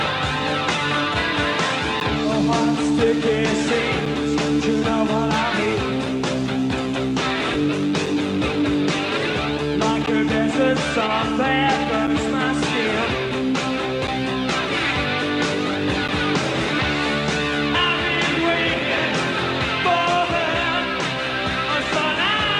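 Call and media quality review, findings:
Gap between stream segments: short hard-edged silent holes of about 3 to 12 ms at 2.0, 4.06, 6.06, 8.06, 10.06, 12.07, 14.07 and 16.08 s. Two-second spacing points to segment boundaries where timestamps don't abut and the player pads silence.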